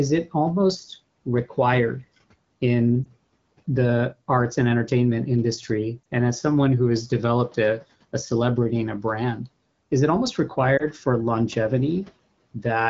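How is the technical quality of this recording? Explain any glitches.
Three brief glitches interrupt the speech, at about 3.04 s, 6.03 s and 10.78 s. Each is a lost AMR speech frame. A single 20 ms block was damaged in transmission and failed its checksum, so the decoder filled the gap by repeating the previous pitch and vocal tract settings at lowered gain. Each one is heard as a quick dip or warble, and the voice comes back weak or rough for a moment. On a spectrogram, each shows as a narrow vertical strip of smeared, fainter harmonics. In the waveform, each is a short dip in the envelope. Around these events, room noise sits about 27 dB below the speech. The HD Voice coding, consistent with a rate of about 12.65 kbit/s, stops near 7 kHz.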